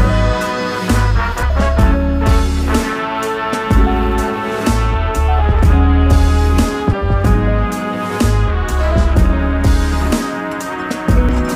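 Three short blips at 1.42, 6.92 and 11.29 s come from damaged data in the compressed stream. Corrupted bytes there throw the decoder off its frames, so it loses sync and hunts for the next header. Each one is a brief glitch, about 14 to 18 ms long.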